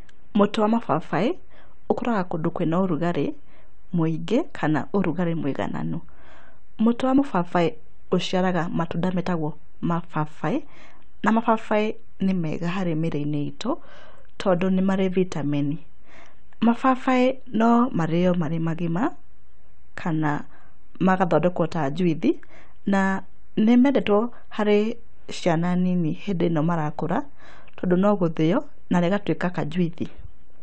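No technical faults can be heard anywhere in this speech recording. Nothing in the audio stands out as a dropout, glitch or other failure in the path it came through.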